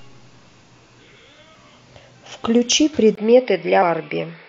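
Speech clip with two brief decoding glitches at 1.55 s and 3.82 s, the blips typical of damaged data in a compressed stream, where the decoder loses frame sync and skips ahead. At 3.15 s a 20 ms gap precedes a duller, band-limited tone with nothing above 5.4 kHz, a faint new noise floor and similar level, likely an input switched to a poorer device.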